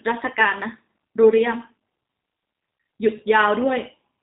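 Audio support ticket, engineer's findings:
G.729 codec on the speech path, throughout: 8 kbit/s-class CELP coding rebuilds speech from filter, pitch predictor and sparse pulses. Result: nothing above 4 kHz, clearly rough, buzzy-synthetic texture, dull band-limited sound, which fits G.729A at 8 kbit/s.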